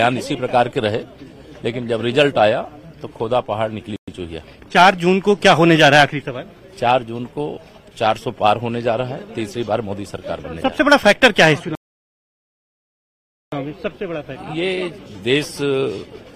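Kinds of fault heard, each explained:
Rebuffering stall: the player ran dry of downloaded audio and just waited for more, so at 11.75 s the sound drops to silence for about 1.77 s, then picks up at 13.52 s exactly where it left off. Nothing's missing, the clip just runs longer.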